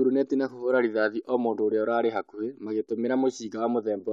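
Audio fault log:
No technical faults heard.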